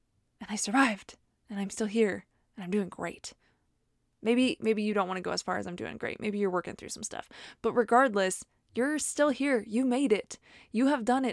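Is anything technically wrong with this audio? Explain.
No, no technical faults are audible.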